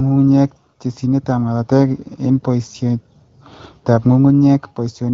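No faults found in the speech; the AMR wideband (HD Voice) path at 12.65 kbit/s leaves only the light coding character expected at that rate.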